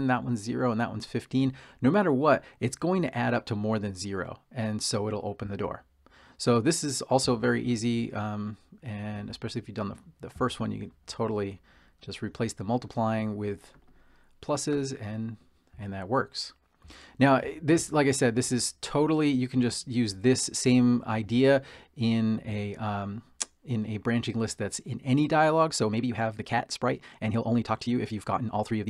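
From 25.56 s to the end at 28.90 s there is a time-stretched section, sped up to 1.35 times the original pace while the pitch stays put. Software likely squeezed this stretch to fit a length by dropping short pieces, so the sound turns rushed.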